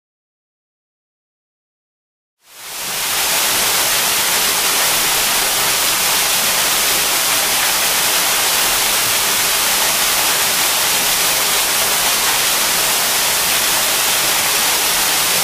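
No technical faults found; the level ramps up smoothly from around 2.5 s to full at 3.48 s without a click or hard edge, and nothing else in the audio needs flagging.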